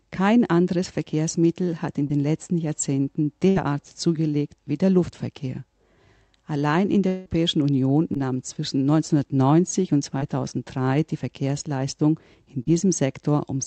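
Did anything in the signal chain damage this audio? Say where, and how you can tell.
Yes, at the network stage. Short concealed packet loss at 2.07–2.11, 8.14–8.17 and 12.63–12.69 s: 20–40 ms of missing audio was extrapolated, leaving brief smeared patches on the spectrogram.

A burst of packet loss at 3.49–3.58 s: about 60 ms missing, filled with continued sound that decays, visible as a stretched, fading band before the audio resumes.

From 7.08 to 7.28 s, 180 ms of audio is replaced by a fading, repeated continuation with no silent gap. This is likely a long network dropout. The waveform shows a smooth decaying envelope.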